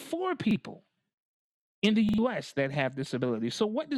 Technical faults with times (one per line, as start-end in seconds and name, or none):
0.51-0.56 repeated buffer
2.09-2.18 repeated buffer